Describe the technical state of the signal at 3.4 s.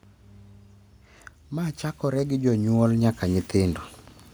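Automatic gain rising is under way at 3.4 s, within a ramp running from 1.50 to 3.88 s. Finding the level too low, the gain control keeps lifting its gain, about 10 dB in total, so the speech and the background swell upward together rather than the speech alone getting louder.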